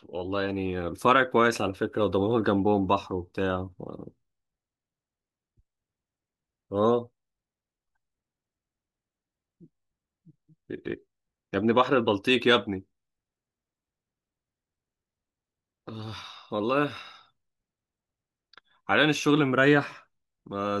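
No technical faults can be heard anywhere in the recording. Nothing in the signal draws attention at any point in the speech.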